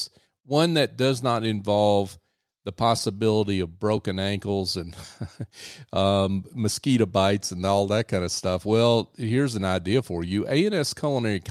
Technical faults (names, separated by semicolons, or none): clock drift between sender and receiver; repeated timing corrections